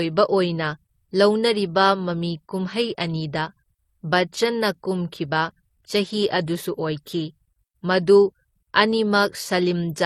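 Throughout the speech, the audio carries two layers of lossy-coding damage at once, most likely from transcoding between lossy codecs: an MP3 stage near 36 kbit/s re-encoded as HE-AAC near 40 kbit/s. The second encoder spends its small bit budget on the first one's smearing and swirling and adds its own synthetic, hollow top end from spectral band replication. The lowest band-limit in the chain stays in place, so the highs sound dull and artificial together.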